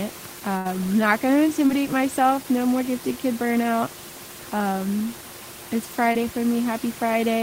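At 0.57 to 0.67 s, just before "not going to", the sound freezes into a held, fading sound, then resumes with a small piece missing. This is a burst of packet loss. About 80 ms of audio never arrived in time. The receiver stretched the last sound across roughly 75 ms, letting it decay, and then jumped ahead to the next audio that did arrive, so the skipped stretch is lost.

Two brief smears follow, at 1.67 to 1.71 s, right after "not going to", and at 6.13 to 6.16 s. Each is a quick wobble lasting a few hundredths of a second. Both are short concealed packet loss. About 20 ms failed to reach the decoder each time. The receiver extended the preceding sound for roughly 17 to 18 ms and blended back into the real signal. Room noise sits about 16 dB below the speech throughout.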